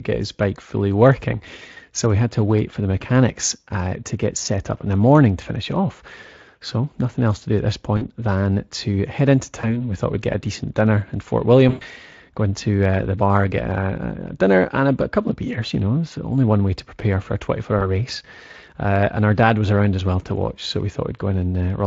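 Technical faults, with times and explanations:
7.97–8.08 s, 9.61–9.89 s, 11.69–11.83 s and 17.79–17.91 s, VoIP packet loss concealed by the speech codec: packets went missing, leaving gaps of about 40, 20, 120 and 20 ms. The first falls between "to do at this" and "than to head into", and the second comes just after "than to head into". The decoder filled each gap by extending the last pitch and spectral shape at falling gain, producing a brief fade. The longest gap, at 11.69 s, fades most. Because each decoded frame depends on the one before, the sound stays thin briefly after packets resume.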